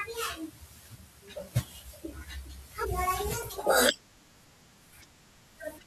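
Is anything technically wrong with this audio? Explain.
Yes, there's a compressed frames skipped fault at 2.82 to 2.85 s. A few frames never got played, so this speech jumps ahead by roughly 150 ms, which fits about three frames of around 43 ms each.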